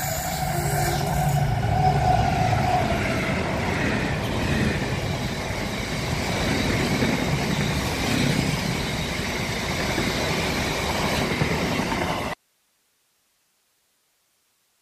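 The signal likely dropped out at 12.34 s with the path left live: an audio dropout to a faint residue, leaving only hiss, roughly 45 dB down, until the end.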